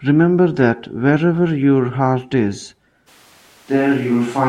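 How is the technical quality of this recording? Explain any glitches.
The recording has one fault, near the end. From 3.09 s to the end, the audio likely switches to a distant microphone. The speech abruptly turns hollow and roomy, with thinner bass and background noise roughly 30 dB down, while loudness stays about the same.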